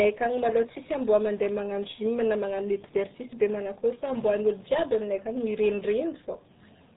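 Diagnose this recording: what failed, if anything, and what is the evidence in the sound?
The failure sits at the codec stage and runs the whole length of the speech: this is RealAudio 14.4 coding with heavy damage. Nothing survives above about 3.8 kHz, and what remains sounds muffled and gargly, which fits a low-rate dial-up codec around 8 kbit/s. A simple telephone-style low-pass filter would dull the top end but leave the voice clean. Here the codec rebuilds speech from a coarse model, so the gargle is baked into the sound itself.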